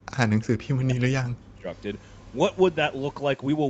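Speech suppressed in double talk from 0 to 0.18 s and 0.37 to 1.7 s: the speech drops steeply, around 40 dB, likely an echo canceller ducking it during simultaneous talk. An echo leak from 2.01 to 2.31 s adds a very faint copy delayed by 225 ms, likely loudspeaker echo the canceller failed to remove.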